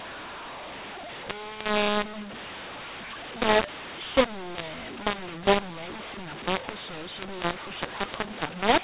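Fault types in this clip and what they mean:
mu-law and A-law mixed up: Throughout the clip, speech coded as G.711 A-law is decoded with the mu-law table, so each 8-bit code lands on the wrong level. Some samples come out too large and others too small, and near-silent ones jump far above zero. The speech sounds harsh and gritty, and the pauses hiss. On a waveform the gaps never settle to a flat line and peaks look jagged. A spectrogram shows dense noise filling everything up to the 4 kHz telephone ceiling.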